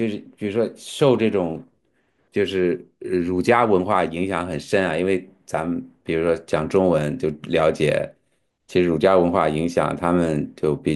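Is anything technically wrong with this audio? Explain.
No, nothing here stands out as a technical problem; the speech comes through steady and intact with no faults to point to.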